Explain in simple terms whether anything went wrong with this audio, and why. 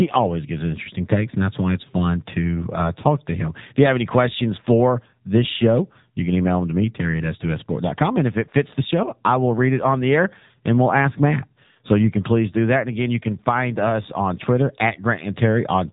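AMR narrowband mobile codec, throughout the whole clip: the speech went through an old-style mobile phone codec that discards everything above 3.8 kHz and rebuilds the voice from a simple model of the throat, so it sounds muffled, thin and noticeably buzzy.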